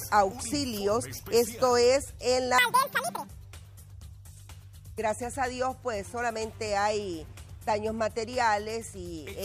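From 2.58 to 3.28 s, the audio is read two samples at a time. It plays at double speed, an octave higher.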